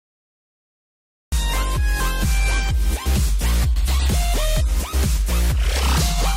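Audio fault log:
0 to 1.32 s, cut-off start: pure digital silence, then the sound jumps in already underway at 1.32 s with no natural attack or fade-in, because capture began late.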